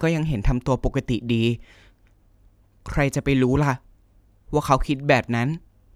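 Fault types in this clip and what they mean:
No technical fault can be heard anywhere in the speech signal.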